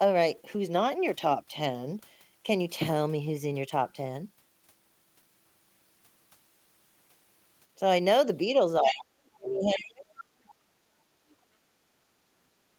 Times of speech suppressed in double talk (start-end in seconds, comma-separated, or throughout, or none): 8.80-10.06